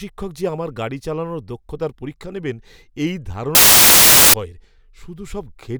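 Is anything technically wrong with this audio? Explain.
Yes. From 3.55 to 4.34 s, just after "দক্ষতার পরীক্ষা নেবেন এই", samples are built from the wrong bytes. Misassembled bytes put the noisy low bits on top, so the speech becomes loud, harsh broadband noise. A spectrogram shows broadband fill, and the waveform a dense block.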